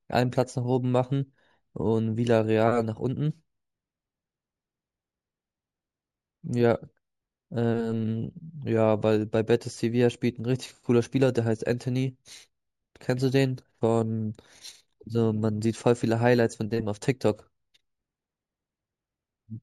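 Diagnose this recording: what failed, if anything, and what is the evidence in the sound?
Imaging from linear upsampling at the sample-rate conversion stage: throughout, sibilants carry a faint metallic shimmer, with mirrored images in the 8–16 kHz band roughly 35 dB down, consistent with 16 kHz audio interpolated to 48 kHz.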